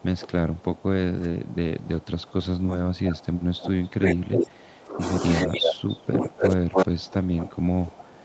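From 0 to 5.01 s, the speech is suppressed in double talk. Its level sinks by up to about 20 dB. The likely cause is an echo canceller that could not separate this talker from loudspeaker echo while both sides spoke. It turned both down.

An echo leak follows at 4.02 to 4.14 s and 4.33 to 4.46 s, then at 5.34 to 5.73 s. A copy of the speech returns 288 ms late, roughly as loud as the speech itself. It likely comes from a loudspeaker echo the canceller failed to remove.

From 5.46 s to the end, double-talk suppression returns. The speech again dips by up to about 20 dB. Over it, the echo leak recurs at 6.13 to 6.25 s, 6.41 to 6.53 s and 6.74 to 6.86 s, still 288 ms behind. The last two scraps are about 5 dB louder than the speech.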